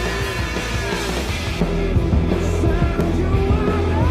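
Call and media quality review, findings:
De-emphasis applied wrongly, 1.60 s to end: sudden dulling, smooth treble roll-off about 11 dB down at 10 kHz relative to 1 kHz. Probable playback or decoder filter: treble cut applied to audio with no pre-emphasis, or applied a second time.

Block of digital silence, 3.01 s: single sharp tick, a 1.45 ms drop to silence with hard edges. Length fits a 64-sample block; probable output buffer not filled in time by the processing or audio driver stage.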